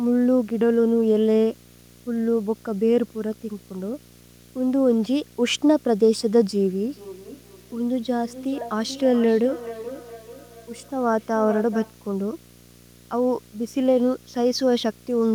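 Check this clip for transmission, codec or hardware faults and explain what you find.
Two faults are present: a display buzz running under the whole clip and a two-device feedback echo in the middle.

Video or display buzz runs throughout, at about 25 dB below the speech. A screen or video cable is coupling into the audio path, giving a 60 Hz buzz at the picture's field rate with hash above it. That hash is what separates it from plain mains hum, which is a smoother, cleaner tone.

Feedback echo between two devices appears from 6.86 s to 11.98 s. A second device in the room replays the call, and this microphone recaptures it, beyond the reach of its own echo canceller. Each word returns roughly 0.4 s later, thinner and more ringing, peaking about 14 dB below the speech. Room reverberation is a smooth decay, whereas these repeats are distinct copies at a fixed spacing.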